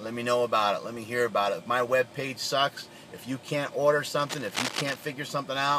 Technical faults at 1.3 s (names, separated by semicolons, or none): none